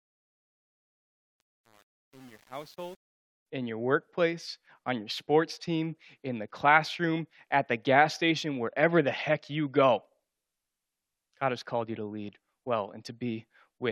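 A fade-in stage keeping too few bits with no dither causes truncation distortion on a fade from 0.0 to 3.46 s, which fits roughly 8-bit resolution. The quiet opening sounds gritty until the fade-in reaches full level at 3.46 s.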